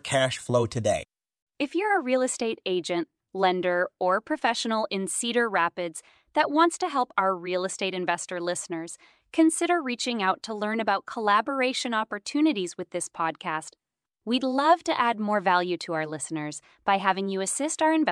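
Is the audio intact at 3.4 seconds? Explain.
Yes, at 3.4 seconds the speech runs on intact, with no dropout, click, distortion or other fault to be heard at that point.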